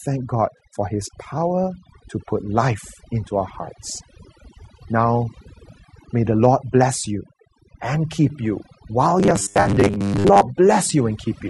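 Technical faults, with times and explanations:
Throughout: overdone noise removal. The noise reduction was pushed so hard that frequency bands sitting near its noise estimate get pulled right down or switched off, and the quieter parts of the voice disappear along with them. What remains of the background is near silence sprinkled with twinkling specks, and the voice's softer spectral detail has been stripped out together with the hiss.
Throughout: low-delay AAC compression. The voice sounds rough and grainy, with noise filling the gaps between its harmonics and an upper band that sounds lowered or synthetic. This is likely AAC-ELD at around 32 kbps. Its short frames resolve pitch harmonics poorly and use up bits quickly, so at this rate the fine harmonic structure of the voice can't be kept. The damage is plainly audible across the whole clip.
0.57 to 0.59 s and 9.61 to 9.67 s: AAC frame loss with concealment. 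In each gap the decoder had nothing new to play and rebuilt the audio from the last good spectrum, filling it in with scrambled signs or interpolated energy. The first gap is about 20 ms and gives a brief smeared, noisy blip. The second is about 40 ms and leaves a longer phasey, smeared patch, which falls inside the robotic stretch below.
9.20 to 10.42 s, right after "and keep you while": robotic sound from repeated short buffers. The voice becomes a rigid, metallic buzz at 100 Hz that still roughly tracks the speech. New audio stopped arriving often enough, so the player kept looping its last short buffer and skipped much of the real signal, most of it across this stretch. Repeating every 10 ms sets the buzz pitch, which likely points to a 10 ms buffer.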